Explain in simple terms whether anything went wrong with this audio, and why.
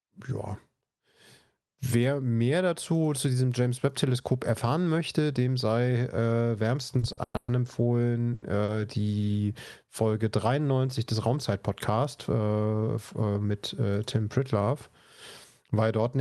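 Yes, three kinds of trouble can be heard in the speech, all from a call's delivery system falling behind and then catching up.

Repeated stalls (stutter) run from 6.99 to 7.50 s. Audio packets arrived late five times. Each time, the receiver held the last sound to fill the gap. The longest hold lasts 120 ms. Nothing is lost, but the speech drags and stutters.

A short stall from a late packet happens twice, at 8.34 s and at 8.64 s. One piece of audio was not ready on time. The receiver stretched the sound before it, by 80 ms and then 40 ms. Then it carried on from the same place.

A jitter buffer speed-up runs from 12.47 to 13.51 s. The receiver had too much audio waiting. To catch up, it cut out tiny slices, about a tenth of a second in total. Speech runs about 10% faster but keeps its pitch, so it sounds hurried.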